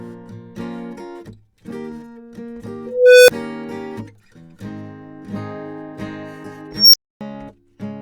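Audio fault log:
2.86–3.29 s, unstable filter: a tone near 500 Hz swells over 0.42 s and clips. Runaway feedback overflows, leaving a brief 6 ms gap.
6.72–7.21 s, unstable filter: a squeal near 5 kHz builds within 0.21 s. Output overflows, then 0.27 s of silence until reset.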